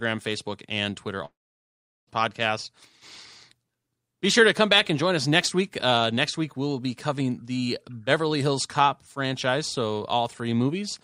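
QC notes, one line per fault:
1.25–2.09 s, long network dropout: the sound gives way to a brief fading buzz, then about 0.75 s of silence, and resumes with 0.82 s missing, likely from lost packets.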